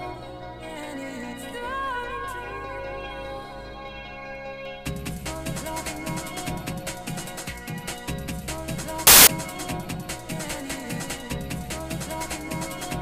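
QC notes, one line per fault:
9.07–9.27 s: samples built from the wrong bytes. Misassembled sample bytes promote fast-changing low bits to the most significant positions, giving a short burst of loud, harsh broadband noise.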